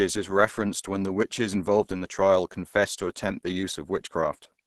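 Throughout the speech, nothing is present above about 12.2 kHz, and the sound is plainly muffled and hoarse. This is likely Opus compression running in its hybrid speech mode, which fits a low bitrate near 16 kbps with super-wideband limits.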